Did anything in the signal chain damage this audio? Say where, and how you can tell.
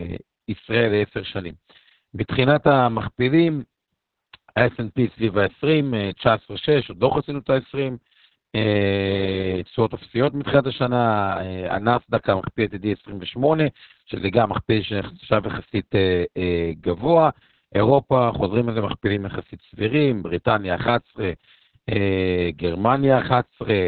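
Yes, at the codec stage, for the whole clip. This is Opus voice compression at heavy damage. Everything above 4 kHz is missing, so the speech is narrowband and muffled, and it sounds hoarse and slightly robotic. That points to the SILK linear-prediction coder running at a very low rate, around 6 kbps, with long frames. At that rate the band is cut to narrowband and the excitation is coded so coarsely that the natural voice texture is replaced by a buzzy approximation.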